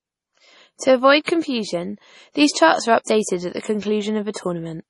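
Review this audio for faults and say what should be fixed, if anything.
Throughout the speech, nothing sits above 11.3 kHz and coarse coding artefacts remain. This is likely low-bitrate audio saved at a high bitrate, fitting a 32 kbit/s MP3 re-encoded at 320 kbit/s. Prevent it by encoding from the original uncompressed source rather than from a compressed copy.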